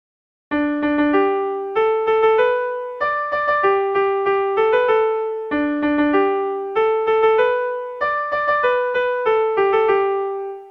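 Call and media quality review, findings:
No faults found in this recording. Nothing here calls for a ticket entry.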